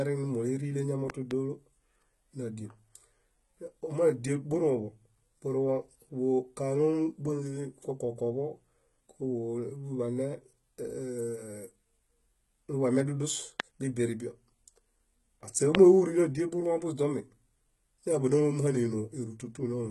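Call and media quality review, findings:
Speech throughout: gritty, lispy sibilance and metallic treble, nothing above 11.8 kHz. Likely HE-AAC compression, heavily damaged; replicated high band misaligned with the true harmonics, consistent with roughly 16 kbps.

Loud pops: a pair at 1.10–1.33 s (about 10 dB over signal), single pops at 13.6 s (about 20 dB) and 15.75 s (about 25 dB). Speech continues underneath. Likely a voltage transient from a connector, switch or driver.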